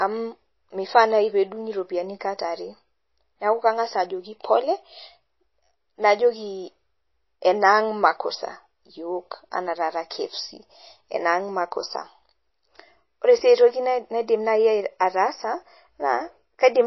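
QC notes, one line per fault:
throughout, MP3 compression: watery, swirly speech with nothing above 5.8 kHz and smeared attacks, likely from a starved MP3 encoder, pointing to about 24 kbps.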